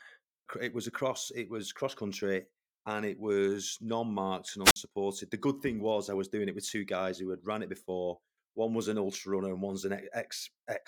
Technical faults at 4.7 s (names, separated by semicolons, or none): wireless microphone squelch dropout